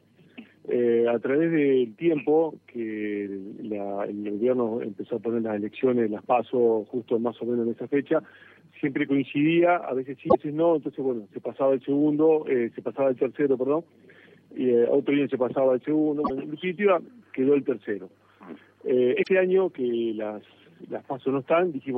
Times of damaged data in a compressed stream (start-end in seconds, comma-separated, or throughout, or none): 10.25-10.35, 16.21-16.31, 19.19-19.28